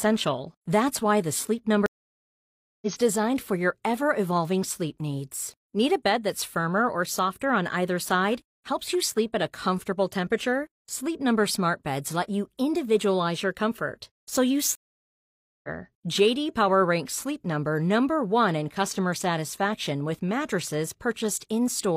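Stream reconnects at 1.86 s and 14.75 s: the connection dropped, the audio goes silent for 0.96 s and 0.88 s, then a fresh decoder picks up live, skipping roughly 0.7 s before "designed for your ever" and about a second after "your comfort so you".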